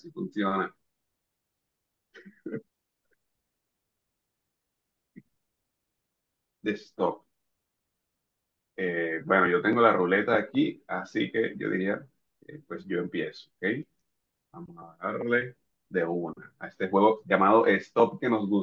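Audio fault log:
No faults detected anywhere in this speech recording.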